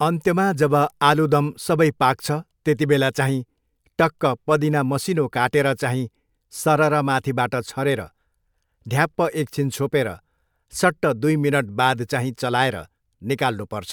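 No technical faults can be heard anywhere in this recording.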